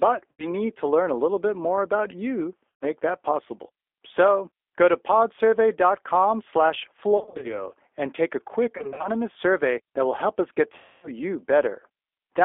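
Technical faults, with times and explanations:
Throughout: G.729 codec. The audio sounds plainly rough and slightly synthetic, confined to roughly 300 Hz to 3.5 kHz. The sound is rebuilt from a vocal tract model and a few pulses per frame, which fits an 8 kbit/s G.729A link.
0.32–0.47 s, 2.70–2.85 s, 7.18–7.66 s (before "and take"), 8.78–9.08 s (before "survey that will help"), 10.76–11.09 s (after "will help us get"): VoIP packet loss concealed by the speech codec. The sound smears into a fading buzzy tone or coloured noise and stays weak briefly afterwards. The decoder extrapolates through about 70 to 270 ms of missing audio.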